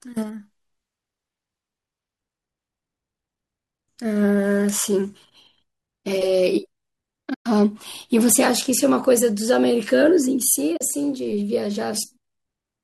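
At 7.34 s the speech drops into silence for about 120 ms, fading out and back in smoothly, and at 10.77 s a shorter soft-edged gap of about 40 ms follows. This is AAC frame loss with muting. Coded frames never reached the decoder, which filled their spectrum with zeros, while the overlapping windows eased the sound down and up. Both gaps fit runs of short 10 ms frames, likely from low-delay AAC compression.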